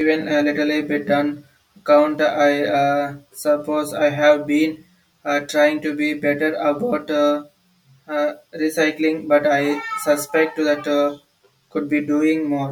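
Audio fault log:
Throughout, channel delay (comb filtering): one side runs roughly 10 ms behind the other, so folding to mono cancels the shared speech at evenly spaced frequencies, first near 50 Hz and then every 100 Hz or so, leaving a fixed hollow, phasey colouring.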